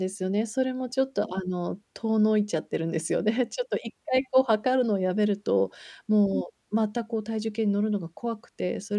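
Nothing here to flag: the speech runs along without a single technical hiccup anywhere in the recording.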